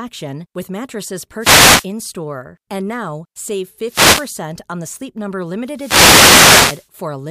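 Speech interrupted by three swishes of static, at 1.39 to 1.86 s just after "with mattresses", 3.87 to 4.30 s after "now save", and 5.73 to 6.89 s: wireless microphone noise hits, where the FM radio link fades and receiver noise rises over the voice.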